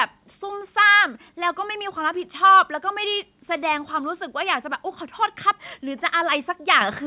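At 6.81 s the microphone volume is stepped up by about 8 dB in a single jump, as the call software raises the device's input level. The speech and the background noise get louder together and stay louder. A gradual compressor swell or automatic gain ride would rise smoothly, and clipping would add distortion rather than a clean level step. The speech travels through a narrowband call path with nothing above 4 kHz, which fits G.711 telephone coding.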